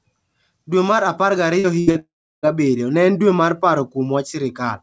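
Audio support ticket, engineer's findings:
Brief smear and wobble at 1.60 to 1.67 s and again at 1.91 to 1.98 s. Short concealed packet loss: about 40 ms each time never reached the decoder, and the receiver extended the preceding sound, then cross-faded back to real audio.

Held buzz or fading hiss, 1.80 to 1.90 s. Burst of packet loss: roughly 80 ms of consecutive audio lost or late. Concealment continued the last sound while ramping it down. Playback resumes past the gap, content skipped.

Fading buzz or hiss, then near-silence lasting about a third of a second, 1.99 to 2.46 s. Likely a long network dropout: around 440 ms never arrived. Concealment decayed out, leaving a silent stretch before audio returns further on.

Call path G.722, band-limited, nothing above 8 kHz.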